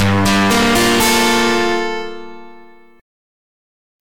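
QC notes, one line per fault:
0.00–1.94 s, hard clipping: the signal is driven about 22 dB past what the stage can pass, so nearly every peak is sheared flat, giving harsh fuzz on all loud sound. The waveform shows squared-off tops, and the spectrogram shows dense harmonics smeared far upward.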